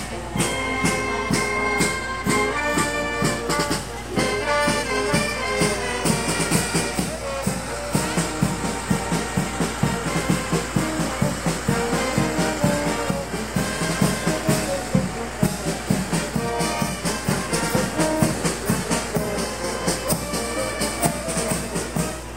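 A steady mains hum runs from the first second to the last. It sits at 60 Hz, the frequency of the power line, with a few low harmonics stacked above it. Some of the supply has leaked into the signal path, most plausibly through a ground loop or a nearby transformer. The tone never changes. It lies only around 15 dB under the wanted sound, so it is loud and hard to miss.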